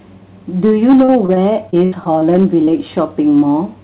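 Hard clipping runs through the whole clip: the signal is driven about 6 dB past what the chain can pass, so a small share of peaks are cut flat, adding a harsh crackle on loud moments.

Repeated packet loss (robotic sound) runs from 1.04 to 2.23 s. Seven gaps, the longest 73 ms, are patched by extending the preceding sound, leaving choppy audio with pieces missing.

Short concealed packet loss follows at 2.65 to 2.69 s and again at 2.71 to 2.74 s. Each brief hole is filled from the previous sound and blended back, heard as a quick smear or wobble.

Throughout, nothing reaches above 4 kHz, which fits a G.711 mu-law call path at 64 kbps.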